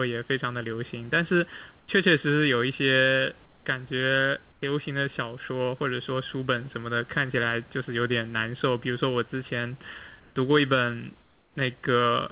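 Speech throughout, with a hollow, phasey colour from channel delay (comb filtering). One channel trails the other by a bit under a millisecond, and summing to mono carves evenly spaced notches starting somewhere around 700 Hz, on top of a band that already stops at 4 kHz on the call path. In the pauses at 1.8–1.88, 3.46–3.66, 4.52–4.62, 10.2–10.36 and 11.22–11.56 s, the real room background gives way to a flat, featureless hiss, about 4–6 dB quieter in most gaps and about 1 dB louder at 10.2 s. That's likely comfort noise in place of the background from discontinuous transmission.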